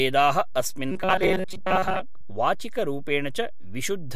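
A speech recording with a DC offset throughout: the waveform sits displaced from zero by a constant amount, wasting headroom and adding steady energy at the lowest frequencies. From 0.92 to 2.01 s the speech turns into a rigid metallic buzz at 188 Hz, robotic sound from repeated short buffers, likely from a roughly 5.3 ms block being replayed while most of the real audio is dropped.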